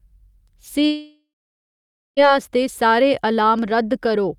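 From 0.85 to 2.20 s comes what is likely a long network dropout. The last sound smears into a fading buzz or hiss, then 0.88 s of silence shows as a flat waveform and blank spectrogram before speech resumes with 1.32 s missing.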